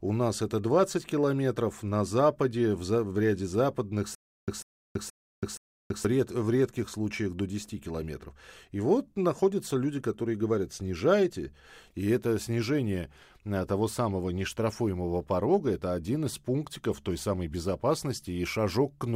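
Stutter with silent gaps from 4.15 to 6.05 s: a 145 ms fragment of speech plays four times, each followed by 330 ms of silence, repeating every 474 ms. The likely cause is a stalled player or stream replaying its last buffer on each retry, so the audio due in that span is lost.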